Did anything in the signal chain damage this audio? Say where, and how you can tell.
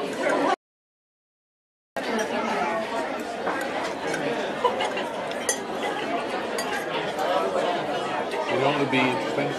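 Yes. From 0.54 to 1.97 s the sound cuts to silence without room tone: an audio dropout to silence, likely a lost input link while the recorder kept writing zeros.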